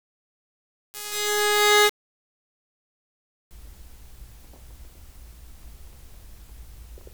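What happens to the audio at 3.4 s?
Truncation distortion on a fade: the undithered fade-in, consistent with a 7-bit gain stage, runs from 0.0 to 3.51 s, so at 3.4 s the music still sounds faintly stepped and gritty.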